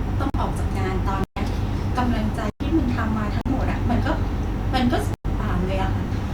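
Short holes interrupt the speech at 0.30 to 0.34 s, 1.24 to 1.37 s, 2.50 to 2.60 s, 3.41 to 3.46 s and 5.14 to 5.25 s. These are blocks of digital silence, where the output buffer likely went unfilled and was replaced with zeros. The two 43 ms gaps fit a 2048-sample buffer.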